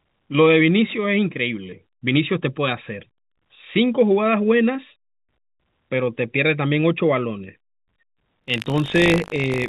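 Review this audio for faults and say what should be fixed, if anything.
Buffer tearing runs from 8.4 s to the end of the clip at 9.68 s. The speech picks up a steady robotic rattle at 50 Hz, which points to a 20 ms buffer period. Within each period a small sliver, a few percent, is stale audio from roughly 70 ms earlier, joined on both sides by hard edits. The writer and the hardware reader have drifted so their positions cross inside every buffer. The G.711 call path's cutoff above 4 kHz is audible beneath it. To prevent it, keep the write pointer a safe margin ahead of the read pointer and resynchronise or reset the ring buffer when an underrun or overrun is detected.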